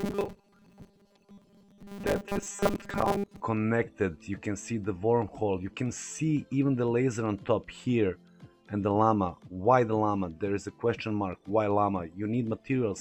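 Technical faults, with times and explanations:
0.01–3.42 s, robotic sound from repeated short buffers: a rigid, metallic buzz at 200 Hz follows the original only roughly. The likely cause is new audio arriving too seldom, so a 5 ms fragment is looped, covering most of this stretch while the real audio is skipped.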